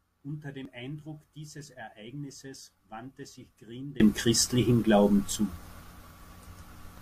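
At 0.65 s there is an overlap between stream segments. Two adjacent segments carry time stamps that overlap, and the player trims the overlapping stretch as if it were duplicated sound, when in fact it was not. Roughly 19 ms of speech is lost and the waveform steps abruptly from one point to a non-adjacent one. It is heard as a single short click or tiny skip in the speech flow.

At 4.0 s a sudden gain jump occurs: the level rises by about 24 dB from one sample to the next and stays there until the clip ends. The speech and the background noise step up together, so the floor becomes audibly louder along with the voice. The likely cause is a digital gain change applied instantly rather than ramped in.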